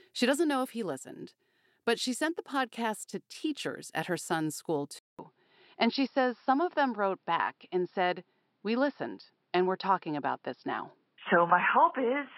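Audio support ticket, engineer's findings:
Dull, boxy tone from 4.99 s, just after "at her son's school", to end. About 0.2 s silence at the change. Nothing above 5.5 kHz. Level shifts roughly 5 dB. New noise about 50 dB down. Likely input switched to a poorer, narrower-band device.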